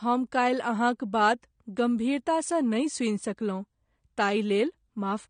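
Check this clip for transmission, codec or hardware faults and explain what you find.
One fault runs through the whole speech clip: AAC compression damage, plainly audible from start to finish. Nothing is heard above 9.7 kHz. The likely cause is an AAC-LC encoder quantising each frame's spectrum coarsely, which fits a low bitrate near 32 kbps. Sibilants come out dull and smeared, with a fizzy, warbling edge.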